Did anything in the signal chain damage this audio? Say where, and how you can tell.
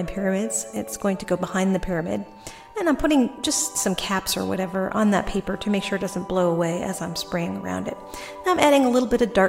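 No, nothing in the signal chain stood out as damaging this audio on listening.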